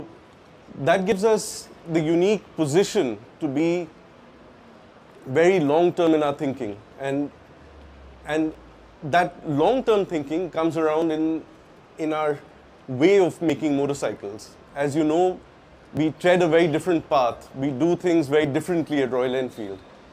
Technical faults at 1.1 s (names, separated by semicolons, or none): audio missing between chunks